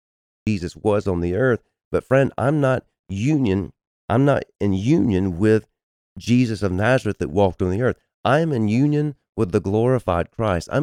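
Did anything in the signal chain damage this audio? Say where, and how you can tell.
Yes. A cut-off start: the file holds digital silence until 0.47 s, then speech begins abruptly mid-sound with no natural attack. On the waveform it's a flat line jumping straight to full amplitude, and the spectrogram shows a hard vertical edge, because capture or streaming began after the speaker had started.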